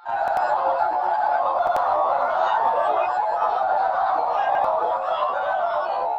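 At 0.28 to 0.37 s, 1.67 to 1.77 s and 4.55 to 4.64 s, a repeated buffer occurs: playback ran out of fresh audio and replayed the previous 93 ms block once, which fits a 4096-sample buffer. Each is heard as a brief stutter with hard joins, displacing roughly a tenth of a second of audio.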